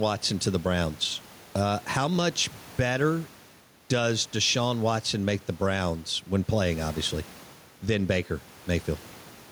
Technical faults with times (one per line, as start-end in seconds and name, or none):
0.00-9.51 gain pumping